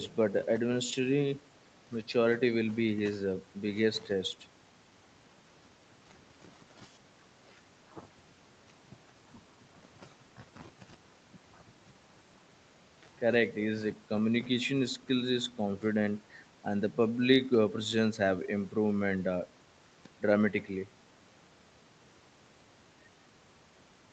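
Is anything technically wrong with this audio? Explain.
No, nothing is technically wrong with this speech recording. It carries nothing above about 8 kHz, which is what you'd expect from a call path's microphone processing and wideband codec, likely Opus at a modest bitrate.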